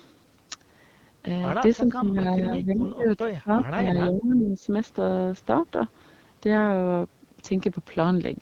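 AMR wideband (HD Voice) codec coding runs through the whole of this speech recording: nothing is present above about 7.2 kHz, and the plainly rough, raspy texture fits one of AMR-WB's lowest modes, around 8.85 kbit/s, where the pulse-driven vocal tract model can no longer shape the voice cleanly. Speech suppressed in double talk follows from 1.82 to 4.68 s, where the voice sinks by up to roughly 20 dB and thins or breaks up for around two seconds in total, likely because an echo canceller confused the talker with loudspeaker echo while both sides spoke and turned everything down. An echo leak appears from 4.12 to 4.22 s as a faint copy of the voice, about 20 dB below it and delayed by 385 ms, likely loudspeaker pickup that an echo canceller failed to remove and sent back down the line.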